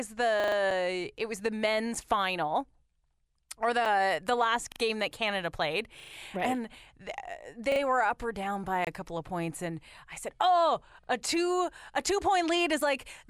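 A stutter at 0.40 to 0.56 s, where one 40 ms slice of sound plays four extra times with a hard join at each repeat, is a repeated buffer. New audio did not arrive in time, so the device replayed its last block, which fits a 40 ms buffer. The same happens at 4.72 to 4.80 s with two extra plays, at 6.00 to 6.12 s with three, at 7.72 to 7.80 s with two, and at 11.04 to 11.08 s with one, just before "a two a two".

Clicks at 0.71 s, just before "it was the", at 1.95 s, just after "it was the", and at 3.85 s are each a 5.8 ms block of digital silence, which fits a 256-sample block. At 8.85 to 8.87 s a 23 ms block leaves a short hole instead, and at 12.81 s a 3.4 ms block gives another tick. In each case the output buffer went unfilled or a calculation produced invalid values, so zeros replaced the sound with abrupt edges.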